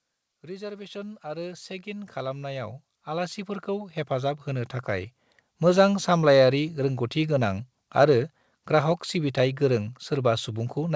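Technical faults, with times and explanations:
0.28–5.93 s, automatic gain rising: speech and background swell together by about 20 dB over five seconds, a slow climb rather than a sudden level step.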